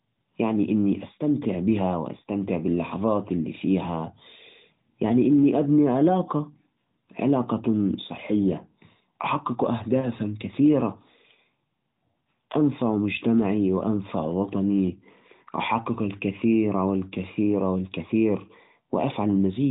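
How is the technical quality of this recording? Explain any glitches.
The recording has one glitch, a lost AMR speech frame. It sits on a narrowband mobile channel that passes nothing above 4 kHz and shows light AMR-NB codec colouring, which fits the 12.2 kbps mode.

From 10.00 to 10.08 s there is a brief dip or warble. It fits a single dropped 20 ms frame. The decoder repeated the last good pitch and vocal tract settings at reduced gain. The sound then recovers, weak or rough for a moment.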